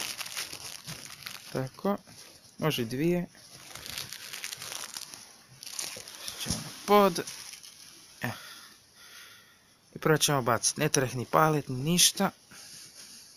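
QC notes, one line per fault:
Throughout: imaging from sample-and-hold upsampling. Samples are repeated without smoothing, which points to 16 kHz audio raised to 48 kHz. A mirrored spectrum copy fills 8 kHz to 16 kHz, about 12 dB down. It adds a bright metallic fizz that follows the level.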